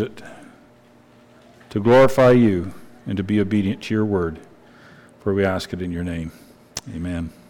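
No technical faults can be heard anywhere here.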